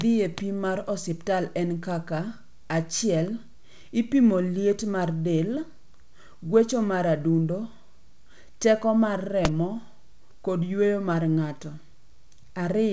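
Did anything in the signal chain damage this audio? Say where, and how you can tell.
No, nothing in the chain damaged this speech: it came through a call path whose content stops at 8 kHz, which fits a wideband codec such as G.722, and that band limit is how the path normally behaves rather than a fault.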